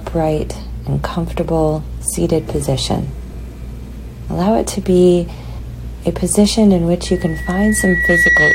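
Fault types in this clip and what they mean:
Loudspeaker feedback squeal: a 1.9 kHz tone swells over about a second to roughly 5 dB above the sound, because microphone-to-loudspeaker loop gain exceeds one at that frequency.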